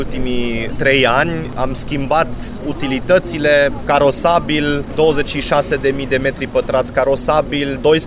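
No technical faults can be heard anywhere in the clip. Nothing in the audio points to a problem in how it was captured, processed or delivered.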